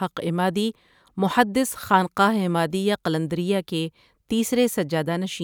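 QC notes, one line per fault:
1.57–5.44 s, sample clock jitter: a faint hiss and roughness rides the speech, loudest on bright, fast-changing sounds. An unsteady converter clock, wobbling under a microsecond, mistimes the samples.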